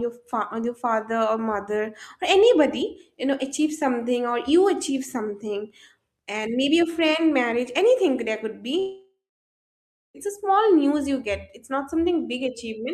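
A speech recording with one gap from 8.79 to 10.17 s, most likely a long network dropout. The last sound stretches into a fading buzz that quickly thins to silence lasting about a second, and when the audio resumes, roughly 1.4 s of speech is simply gone. Unlike a short packet-loss glitch, the concealment gives out and goes silent, and unlike a natural pause, it starts mid-sound and the speech jumps ahead.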